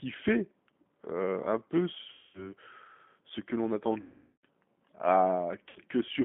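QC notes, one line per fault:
Throughout: G.729 codec. The speech is intelligible but rough, slightly synthetic and boxy, with plainly audible damage. An 8 kbit/s coder rebuilds each frame from a vocal tract filter, a pitch predictor and a few pulses. The band is held to roughly 200 Hz to 3.5 kHz.
2.13 to 2.52 s, 4.01 to 4.45 s, 5.70 to 5.80 s: VoIP packet loss concealed by the speech codec. Each gap turns into a stretched, buzzy tone or coloured noise that fades and leaves the speech weak afterwards. The decoder extrapolates its last pitch and filter at falling gain, which fits roughly 210, 420 and 60 ms of lost audio.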